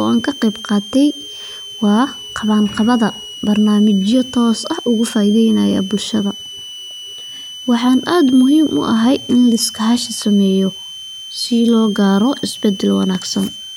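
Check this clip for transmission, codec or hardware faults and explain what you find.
One hardware fault runs through the whole speech clip. A switching supply whistle sits near 3 kHz, drifting between 2.91 and 3.19 kHz, roughly 15 dB below the speech. A switching power supply is cycling at an audible rate, and its high whine leaks into the audio.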